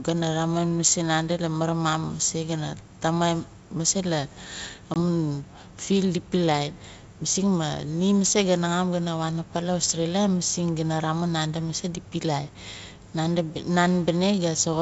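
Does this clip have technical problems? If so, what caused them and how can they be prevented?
Yes. At 4.94 to 4.97 s, packet loss on an ADPCM call leaves a 20 ms silent gap, about one packet. The decoder's predictor then restarts out of step, so the speech returns slightly distorted for a short while, unlike a plain dropout that resumes cleanly. Packet loss concealment and a jitter buffer on the link would prevent this.

Hard clipping at 8.25 to 8.32 s (about 6 dB over) and 9.84 to 9.91 s (about 5 dB over) flattens the loudest peaks into crackle. It sits only on those peaks, unlike the steady upper-band hiss of the G.722 wideband coding carrying the call. Lowering input gain to leave headroom before conversion would prevent it.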